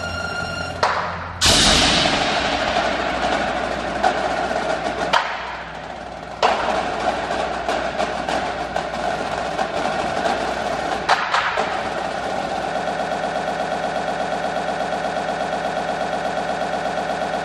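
At 12.80 s the audio locks into a broken-record loop: a fragment about 0.12 s long repeats exactly, back to back, 39 times until the clip ends, giving a rapid mechanical stutter in place of whatever should have followed. The cause is likely a stalled player, encoder or stream that kept resending its last held fragment. On a waveform the section shows identical blocks tiling every 120.58 ms; a spectrogram shows the same narrow slice copied side by side like vertical stripes.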